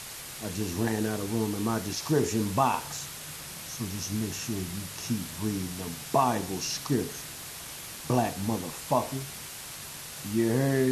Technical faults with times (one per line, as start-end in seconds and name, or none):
0.00-10.91 low bit depth with dither